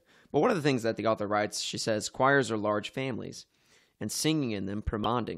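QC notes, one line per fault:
5.04 s, damaged data in a compressed stream: a quick blip near the end of the speech. Corrupted data threw the decoder off, so it garbled that bit and jumped to the next clean frame header.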